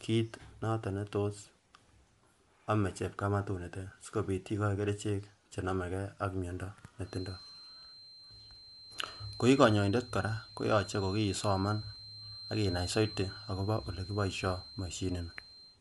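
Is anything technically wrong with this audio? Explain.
Yes, there are two faults. Across the entire recording, the speech carries the damage of Bluetooth LC3 compression. Nothing survives above 11.5 kHz, and the upper band that remains sounds breathy and grainy, as if noise has been painted in where detail should be. That is likely the LC3 codec: its transform coder drops much of the high spectrum and substitutes shaped noise. The audible strain points to a moderate bitrate near 48 kbps with 10 ms frames. A plain low-pass filter would differ, because it would leave a clean, dull top rather than this hissy, textured fill.

From 7.01 s to the end, a thin, steady feedback whistle sits behind the speech at 4.1 kHz, well below the voice level and swelling and fading slowly in loudness. The likely cause is a loudspeaker-to-microphone loop held right at the edge of instability, so one frequency keeps ringing without growing. 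Unlike a fixed electronic tone or interference, it neither stays perfectly constant nor swells into a howl.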